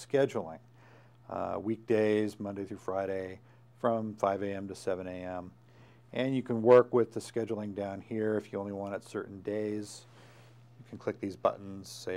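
No technical faults can be heard anywhere in the recording.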